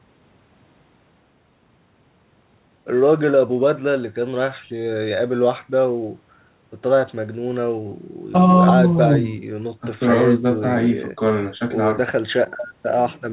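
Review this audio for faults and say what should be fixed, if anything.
No faults turn up in the audio, so nothing needs to be fixed.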